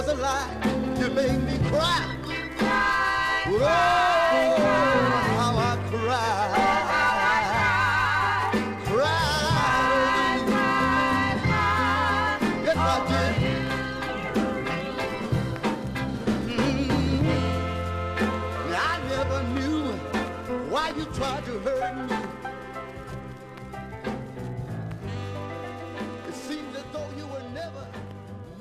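No dropouts, clicks, distortion or level problems are audible anywhere in the clip, and nothing in it points to a fault in the signal path.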